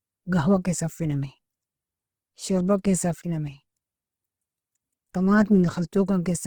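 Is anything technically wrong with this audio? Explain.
Yes. Throughout, likely Opus compression, at a level that fits roughly 16 kbps, fills starved bands with noise. The speech turns grainy and rough rather than swirling with spectral holes as MP3 would.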